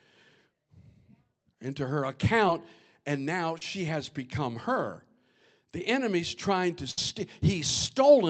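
Brief short concealed packet loss hits at 2.47 s and again from 3.58 to 3.62 s: audio reached the decoder too late, so the receiver extended the preceding sound to bridge the hole. The first leaves a brief smear; the second, about 30 ms, smears the speech.

From 6.91 to 6.98 s comes a burst of packet loss, roughly 60 ms missing outright. Concealment stretched the last sound while fading it, giving a short held, dwindling tail before speech resumes with that stretch gone, heard through the Opus call path's 8 kHz band limit.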